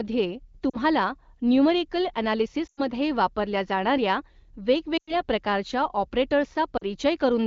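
At 0.70–0.76 s and 6.77–6.84 s you get short wobbles, about 40 ms of missing speech each. At 2.67–2.82 s (right before "वापरल्या जाणाऱ्या") and 4.97–5.21 s, roughly 100 ms is lost, so the sound drops to near silence before coming back rough. These are classic lost AMR speech frames: frames get corrupted and the decoder repeats the last good settings while ramping the gain down.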